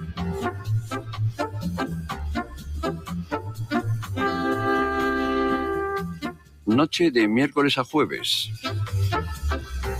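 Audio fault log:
Throughout: noise suppressor applied to music or sounds. A speech-oriented suppressor treats sustained and ambient content as noise, so the gain swings by about 15 dB. Onsets pass while held portions and tails are pulled down, giving a pumping, thinned texture.
0.0–0.19 s, 0.51–1.2 s, 1.47–1.67 s, 2.0–2.23 s, 2.42–2.78 s, 2.94–3.67 s, 6.11–6.67 s: sound cut by the noise suppressor. Steady or decaying material in these spans sinks by about 7 to 12 dB, deepest near 2.94 s and 6.11 s, as the suppressor clamps what it misreads as noise.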